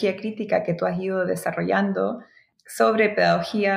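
Nothing stood out as a technical problem on listening.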